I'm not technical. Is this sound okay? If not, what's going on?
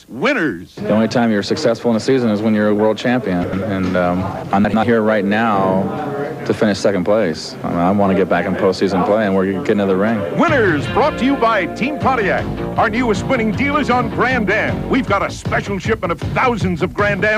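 No, there are two short glitches, at about 3.44 to 3.62 seconds and again at about 4.64 to 4.83 seconds. Both are a fault called chunks out of order. The sound is handled in small pieces of roughly a tenth of a second. In each spot, one piece arrived a step late and played after the piece meant to follow it. Nothing goes missing, but the order is scrambled, so you hear a brief jumbled moment.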